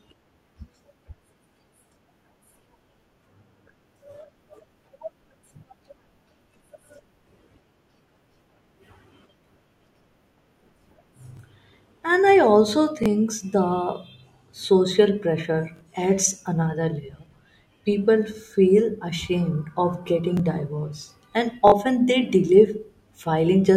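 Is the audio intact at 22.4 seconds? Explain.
Yes, at 22.4 seconds the speech plays through intact, with no dropout, click, distortion or other audible fault at that moment.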